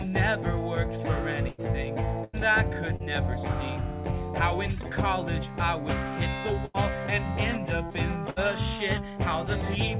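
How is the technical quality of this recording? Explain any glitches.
The recording has five packet-loss glitches, four longer dropouts and one brief smear. It has the narrow, telephone-like quality of a call: nothing is heard above 4 kHz, which fits a G.711 mu-law call path at 64 kbps.

Burst of packet loss at 1.49 to 1.61 s, 2.24 to 2.36 s, 6.65 to 6.77 s and 8.30 to 8.39 s. Several consecutive packets failed to arrive in time. The receiver stretched the last good audio across each hole and let it fade, so you hear a held, decaying continuation of the preceding sound. Playback then resumes with about 90 ms gone in the first three cases and about 60 ms in the last.

Short concealed packet loss at 2.96 to 3.02 s. About 30 ms of audio never reached the decoder. The receiver filled the gap by extending the sound just before it and then cross-faded back into the real signal. The result is a brief smear or wobble rather than a clear dropout.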